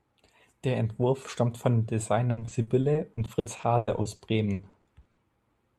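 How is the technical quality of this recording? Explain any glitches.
The first couple of seconds are clean, but from about 2.31 s to 5.19 s the speech breaks up with repeated packet loss, giving that robotic sound. Around 22 short holes land in quick succession, the longest about 100 ms, and each gets patched by stretching the last bit of sound forward. Altogether about 840 ms, roughly 29% of that stretch, is filled in rather than real. So you hear choppy, robotic speech with bits missing.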